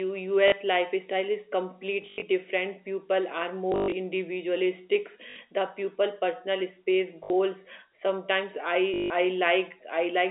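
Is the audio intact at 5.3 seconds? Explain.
No. From 5.3 to 5.36 s there is packet loss with last packet repeated. About 60 ms went missing, which fits three 20 ms packets, and the final packet was replayed. The waveform shows identical repeated blocks, and the spectrogram shows a 50 Hz buzz.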